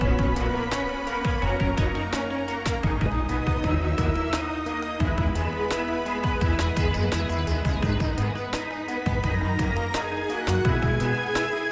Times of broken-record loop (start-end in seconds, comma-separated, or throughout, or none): none